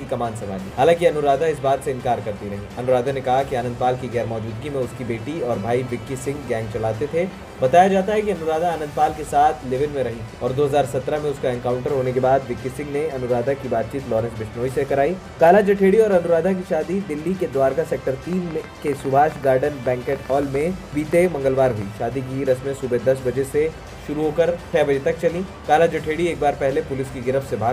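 From 18.33 to 21.83 s, a ragged ticking rides over the sound: about thirty similar clicks, around 7 per second at uneven spacing, peaking about 5 dB above the signal. This train of clicks likely comes from nearby interference or a faulty connection or power supply injecting repeated pulses.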